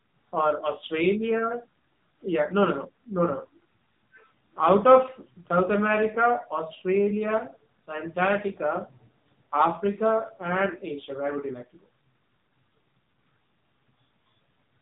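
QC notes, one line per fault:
Throughout, AMR narrowband mobile codec: nothing passes above about 3.8 kHz, and the speech sounds buzzy and synthetic, which points to a low AMR-NB mode near 6.7 kbps, where a vocal-tract model driven by sparse pulses per frame replaces the real waveform.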